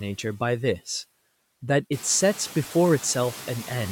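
Speech runs through noise suppressor artifacts for the whole clip: the suppressor pulls the steady background down by about 16 dB between phrases, then lets it up under each word. On a spectrogram the noise floor gates between phrases. The room noise that steps up around 2 s sits about 18 dB below the speech.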